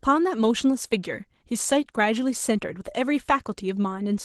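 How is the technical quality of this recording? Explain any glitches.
The quality is plainly degraded by one fault that runs through the entire clip. Opus voice compression at what sounds like about 16 kbps codes the speech excitation coarsely, leaving it hoarse, grainy and slightly robotic.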